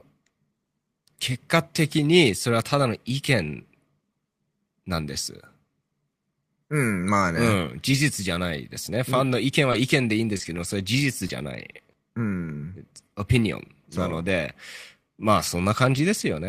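Between 9.71 and 11.95 s the speech shows scattered short gaps: about four tiny packet losses, none much over 20 ms, each papered over by extending the preceding sound. Unlike one long dropout, these leave only brief ticks and smeared hiccups.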